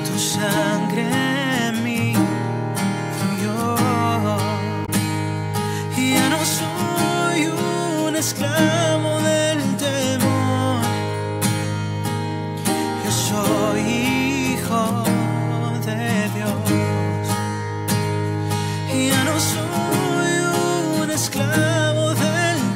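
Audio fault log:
4.82–4.89 s, damaged data in a compressed stream: for about 70 ms the decoder is fed bytes that no longer form valid frames, so it misreads them, loses sync and hunts for the next usable frame header before clean audio resumes. The garbled output comes out as a short chirp, squawk, click or hole. On a spectrogram and waveform it shows as a brief break in the surrounding audio.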